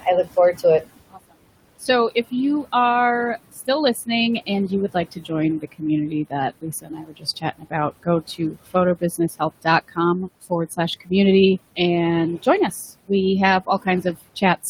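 A speech recording with room noise sitting about 16 dB below the talker, run through a noise suppressor that causes two problems. The first, noise suppressor artifacts, runs throughout. The suppressor pulls the background down by about 20 dB in the gaps, so the noise floor sinks whenever the talker pauses and climbs back up underneath each phrase. That pumping, tied to the speech, is what separates it from the room noise itself, which would stay constant.

The second is speech cut by the noise suppressor. The suppressor mistakes parts of the talker's speech for noise and turns them down with the background. This happens at 0.01–0.64 s (drops of about 10 dB), 1.11–1.35 s (about 21 dB), 1.79–2.32 s just before "you are" (about 12 dB), 3.49–4.08 s just after "you are" (about 20 dB), 4.46–11.11 s (about 20 dB, around two seconds affected in total), 12.43–13.1 s (about 19 dB) and 13.66 s to the end (about 15 dB). 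Within most of these spans only brief pieces are affected. Soft consonants and word endings come out swallowed or faint. Unlike a dropout, the sound is dimmed rather than silenced.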